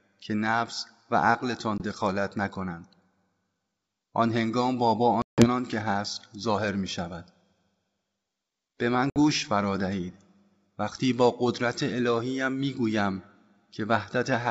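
Packet loss on an ADPCM call cuts hard-edged silent gaps at 1.78–1.81 s (20 ms), 5.22–5.47 s (160 ms) and 9.10–9.18 s (60 ms). The decoder's predictor and step size lose track of the sender's, so the speech returns with brief distortion before settling.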